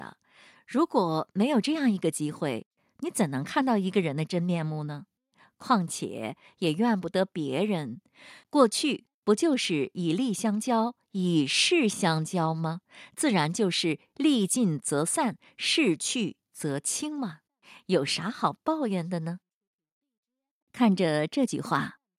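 Speech recording with no technical faults detected anywhere in the clip.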